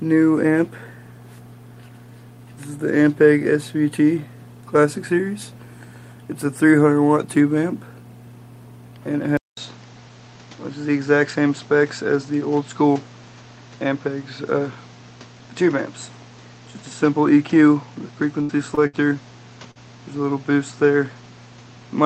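At 9.37 s the audio goes silent for 200 ms, then returns duller, with nothing above 7.8 kHz and new background noise about 30 dB down. This is likely an input switched to a poorer device. A burst of packet loss hits at 18.41 to 18.51 s and 18.87 to 18.95 s. Each gap is filled by a fading continuation of the last sound, after which roughly 60 to 80 ms is missing. Short concealed packet loss adds brief smears at 18.75 to 18.79 s and 19.71 to 19.77 s, each patched over by continuing the preceding sound.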